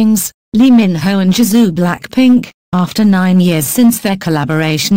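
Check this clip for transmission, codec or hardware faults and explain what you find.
One fault runs through the whole clip: hard clipping. Some stage is driven about 1 dB past its ceiling, so roughly one percent of samples have their peaks sliced flat. Those squared-off tops add high harmonics, heard as brief crackle on the loudest moments.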